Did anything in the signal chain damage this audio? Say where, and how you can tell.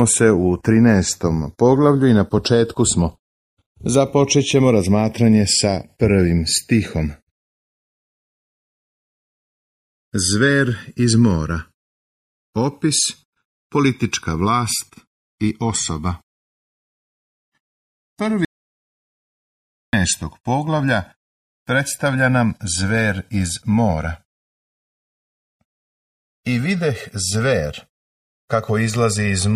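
Yes. Channels drifting apart runs through the whole clip, at the converter stage: the left and right channels were captured by two devices on separate sample clocks, differing by something like 50 parts per million. The offset between them slowly grows, reaching roughly a millisecond and a half by the end. Folded to mono, the comb-filter notches glide steadily across the spectrum, heard as a slow flanging sweep that changes over the length of the clip.

An audio dropout to silence runs from 18.45 s to 19.93 s, about 1.48 s of sound lost. The audio stops abruptly, falls to silence with no room tone or noise floor at all, then resumes mid-flow. That total emptiness points to the input being lost upstream of the recorder, likely a disconnected device or failed link at the input stage, while the recorder kept writing silence.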